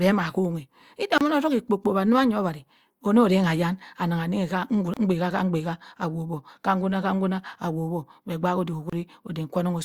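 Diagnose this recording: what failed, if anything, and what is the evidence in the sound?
A likely Bluetooth dropout on the wireless link: the speech cuts to silence for about 29 ms at 1.18, 4.94 and 8.90 s, then resumes further on, consistent with two lost packets each.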